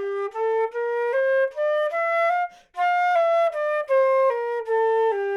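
No technical faults are audible.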